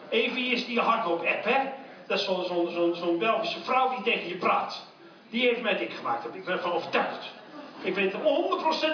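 No technical faults can be heard anywhere in the clip.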